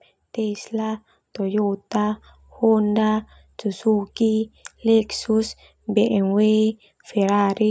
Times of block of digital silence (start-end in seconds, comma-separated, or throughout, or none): none